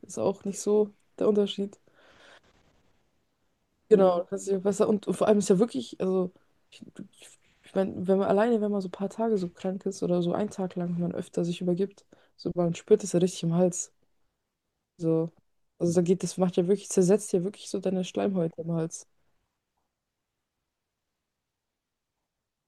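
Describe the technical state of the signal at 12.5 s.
At 12.5 s the speech signal is intact, with no technical fault audible at that moment.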